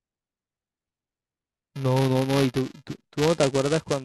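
From start to finish the speech carries buffer tearing: a steady robotic buzz near 375 Hz, which fits a 128-sample buffer. The writer and the hardware reader have slipped, so inside each period a small slice, roughly a twentieth, replays audio from a lap earlier, a few milliseconds old, with hard joins on both sides. Unlike scattered underrun clicks, the rattle keeps an exact rate and sounds only while speech is present.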